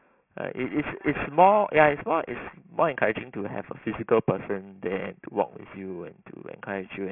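Throughout the speech there is aliasing. The audio was resampled from 16 kHz to 6 kHz without filtering, so content above 3 kHz folds back as unrelated false tones roughly 10 dB below the speech. Plain band-limiting would only sound dull, but here sibilants turn gritty and metallic.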